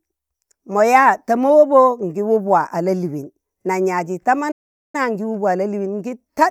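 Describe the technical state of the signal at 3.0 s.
At 3.0 s the speech signal is intact, with no audible technical fault at that moment.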